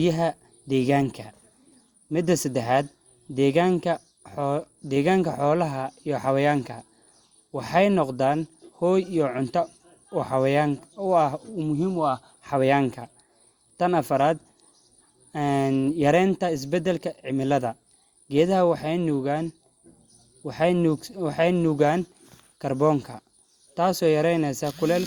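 Nothing in the recording stood out as a technical problem on listening.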